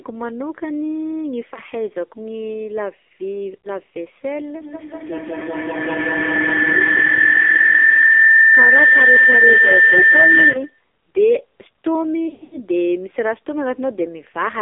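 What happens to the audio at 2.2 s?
At 2.2 s the speech is passing through the AMR narrowband mobile codec, which affects the whole clip rather than a single moment. The encoder rebuilds the voice from a vocal-tract model driven by a few pulses in each 5 ms, and the heavy damage points to one of the low modes near 6 kbps. The result is a buzzy, synthetic voice confined to a line band of about 300 Hz to 3.5 kHz, with nothing above it.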